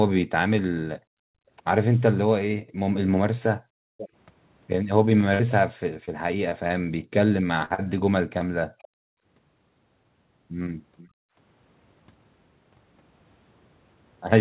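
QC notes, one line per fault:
0.98–1.5 s, 2.63–2.77 s, 3.59–3.98 s, 8.78–9.18 s and 11.08–11.36 s: background gated by the echo canceller. In each window the room tone beneath the talker collapses by about 40 dB, then swells back. The canceller judged the far end to be playing through the loudspeaker and clamped the microphone path hard to stop echo. Background noise is switched off along with any echo, and it returns when the clamp releases.
3.98–4.09 s, 8.79–8.88 s and 10.97–11.08 s: echo leak. A repeat of earlier speech surfaces roughly half a second behind the original: about 503 ms late and about 15 dB down in the first, and about 477 ms late and about 30 dB and about 25 dB down in the later two. The likely cause is a loudspeaker-side echo canceller letting residual pickup slip through.
5.34–5.41 s and 7.65–7.72 s: burst of packet loss. At 5.34 s about 60 ms of audio is gone, papered over with 53 ms of synthesized continuation. 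At 7.65 s, 40 ms is missing and 48 ms filled. The decoder extends the last sound and fades it, so a voiced stretch becomes a brief held buzz and unvoiced sound becomes a sinking hiss. Speech then resumes a little further on, with the part in between missing.
6.05–6.09 s, 6.49–6.53 s, 6.67–6.71 s, 7.74–7.80 s and 8.38–8.42 s: short concealed packet loss. Each is about 20 ms missing, or 40 ms at 7.74 s, just after the second burst. Each gap is filled by extrapolating the preceding waveform's pitch, or shaped noise, then cross-fading back. The result is a momentary smear or wobble on the 8 kHz-sampled G.711 audio, whose band already stops at 4 kHz, and a short consonant can vanish.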